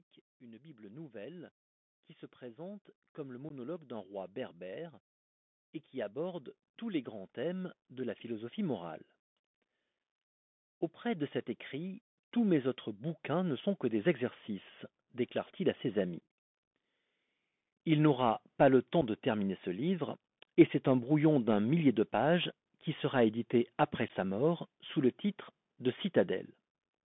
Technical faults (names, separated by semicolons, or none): Bluetooth CVSD headset codec; automatic gain rising; unconcealed Bluetooth headset packet loss